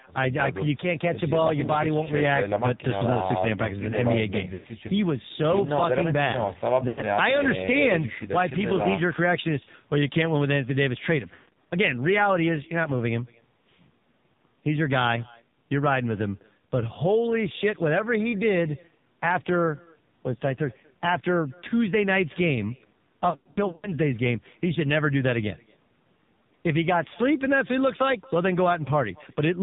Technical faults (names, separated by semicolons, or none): echo with no canceller; AMR narrowband mobile codec; lost AMR speech frames